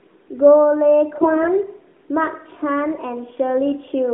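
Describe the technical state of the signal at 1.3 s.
At 1.3 s the signal is inside a burst of AMR bit errors running from 1.16 to 1.49 s. On a weak link, roughly a tenth of the lightly protected bits in each frame arrived flipped, yet the frames were still decoded, so excitation pulses landed in the wrong places and the finer pitch, gain and spectral values went astray. The speech keeps its rough pitch and level but turns hoarse, scratchy and gargly, all within the narrow 250 Hz to 3.5 kHz mobile band.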